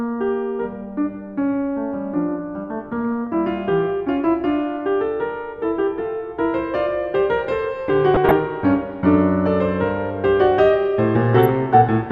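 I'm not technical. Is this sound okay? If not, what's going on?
No. The radio reception was weak, so damaged data slipped past the receiver's error correction. This is DAB burbling: parts of the music briefly break up into short blips of noise at 3.12–3.27 s, 8.14–8.31 s and, most roughly, 11.33–11.49 s.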